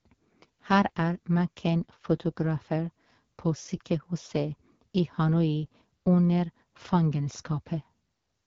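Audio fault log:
Throughout: AMR wideband (HD Voice) codec. The speech has a rough, raspy edge and nothing above 7 kHz, with a thin hiss-like top band. That points to one of AMR-WB's lowest rates, around 8.85 kbit/s, where the pulse-driven vocal model runs short of bits.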